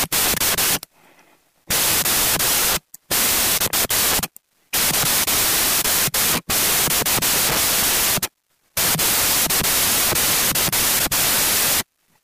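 From start to finish the audio shows a wrong sample width: 16-bit integer data read back as packed 24-bit samples. Each three-byte read straddles the original two-byte values, so most samples are assembled from mismatched bytes, and the sound runs 1.5 times too fast and pitched up. It comes across as loud, harsh noise with the original faintly audible beneath it. A plain sample-rate mismatch would shift speed and pitch without this noise wall.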